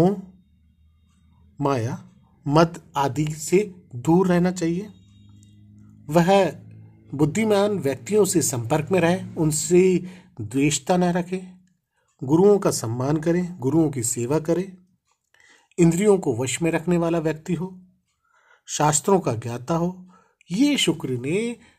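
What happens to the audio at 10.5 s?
Nothing goes wrong at 10.5 s; the audio runs on intact through that moment.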